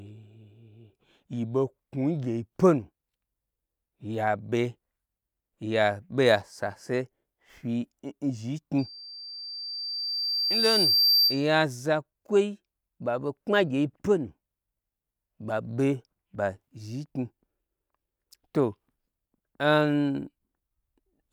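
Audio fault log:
8.78–11.49 s, loudspeaker feedback squeal: the microphone picks up its own loudspeaker, so a 4.7 kHz tone runs away, swelling over about two seconds to about 5 dB above the speech.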